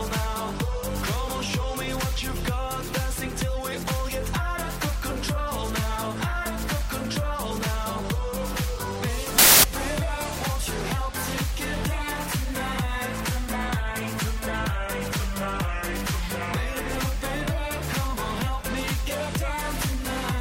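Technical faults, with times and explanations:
9.38–9.64 s: samples built from the wrong bytes. The bytes are misassembled, so low-order bits dominate each value, giving a quarter-second burst of loud, harsh broadband noise.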